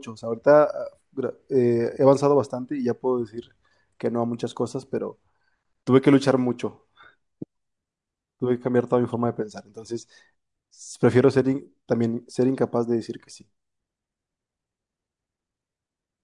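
The speech recording carries no audible technical fault at any point, with the signal holding steady and intact throughout.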